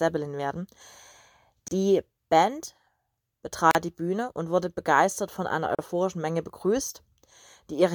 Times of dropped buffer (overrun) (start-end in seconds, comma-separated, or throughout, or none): none